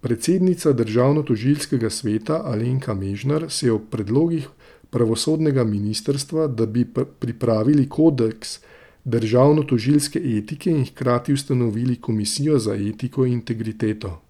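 No technical faults can be heard anywhere in this recording.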